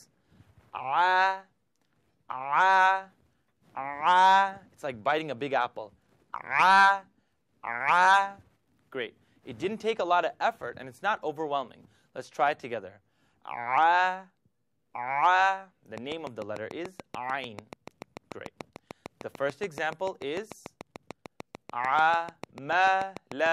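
From 15.98 s to 23.47 s there's a train of clicks, about fifty regular pops at 6.8 per second, poking out above the sound, likely interference getting in.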